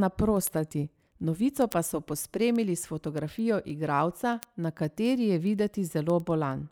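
From 0.16 s to 6.62 s, the speech carries a train of sharp ticks at a steady pace of roughly ten per second, some seventy in all, with uneven strength from one tick to the next. These are word clock ticks: the receiving device runs on its own clock instead of locking to the sender's, so the two drift apart, which fits a mismatch of around 200 ppm, and each time they slip, a single sample is dropped or repeated.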